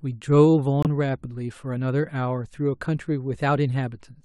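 At 0.83 s a corrupt frame is muted: the decoder rejected one damaged frame and substituted silence, leaving a sudden 42 ms hole that shows as a blank vertical gap, fitting a single lost frame.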